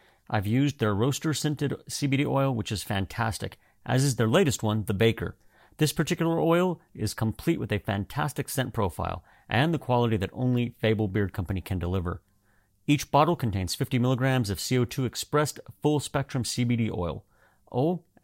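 No technical faults can be heard in this recording.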